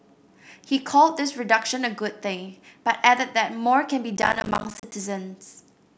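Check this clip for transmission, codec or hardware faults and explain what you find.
One fault is present: processor overload crackle from 4.17 to 4.92 s. The processor repeatedly missed its deadlines, and the hard-edged silent gaps point to buffers of roughly 10 ms, around forty of them dropped. The result is a gritty crackle over the speech that stops when the load passes.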